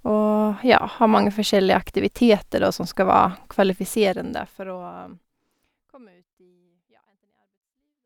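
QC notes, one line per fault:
Nothing stood out on listening; the smooth fade-out from about 4 s to the end is a deliberate edit.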